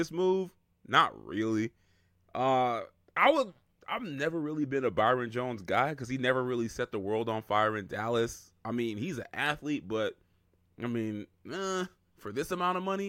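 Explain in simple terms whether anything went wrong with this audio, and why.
Nothing went wrong with this speech recording that a listener can pick out. No moment in it stands out as a fault, so there is nothing here to explain.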